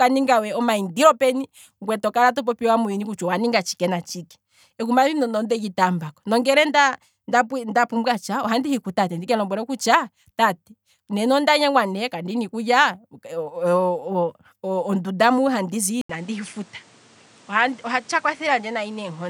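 At 16.01 s the recording likely switched its input to a poorer device. After an 80 ms silence the speech returns duller, with nothing above 10.4 kHz, a few decibels quieter, and carrying a new background noise about 30 dB below it until the end.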